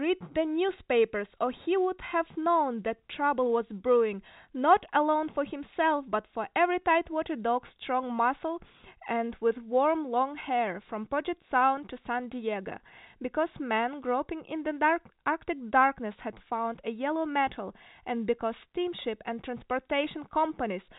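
No faults are audible in the speech, which carries the narrow band of G.711 telephone coding, with nothing above 3.8 kHz.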